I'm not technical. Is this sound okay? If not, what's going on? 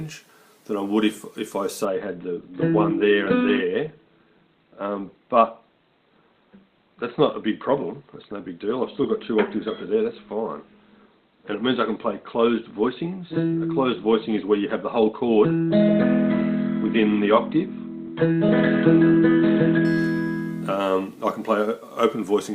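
No. From 1.85 to 19.85 s there's an adaptive stream at a lower bitrate: quality suddenly drops, treble above 4.3 kHz vanishes, then returns, with no gap or silence, unlike a dropout.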